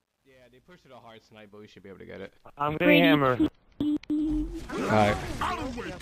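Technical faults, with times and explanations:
0.00–2.91 s, truncation distortion on a fade: the fade-in is gritty from the start, worst up to 1.47 s, which fits roughly 11 bits kept without dither. The grit follows the level, so the fault is quantisation, not gate chatter or packet dropouts.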